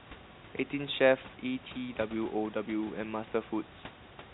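No technical faults are audible in this speech.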